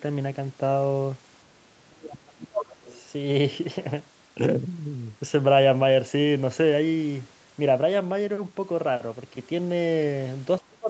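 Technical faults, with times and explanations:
1.76–2.89 s, speech suppressed in double talk: the speech sinks and breaks up for about a second in all, falling by roughly 35 dB at its deepest. This is likely the echo canceller attenuating everything while both ends talked at once, unable to separate the near talker from loudspeaker echo.
2.89–3.0 s, other side's voice leaking through: a brief, faint scrap of a second voice sits about 30 dB below the speech, likely residual far-end audio from the loudspeaker that the echo canceller left in the microphone signal.
10.68–10.9 s, speech suppressed in double talk: the final fifth of a second drops away by roughly 30 dB, the same gating pattern as earlier, likely with the suppressor clamping the microphone path during overlapping talk and cutting the clip's tail.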